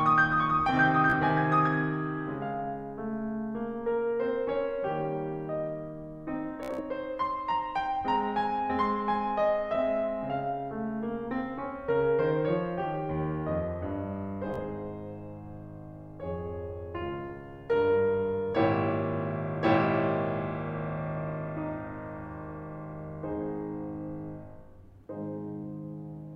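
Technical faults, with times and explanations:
1.10–1.14 s, 6.63–6.81 s, 14.54–14.58 s, Bluetooth stutter: late packets made the receiver replay its last buffer, so a slice of music repeats as a buzz, then jumps ahead. The outer events skip 30.5 ms. The middle one loses 122 ms, with a longest run of 61 ms. On a spectrogram, identical slices repeat. The waveform shows a looped block ending in a seam.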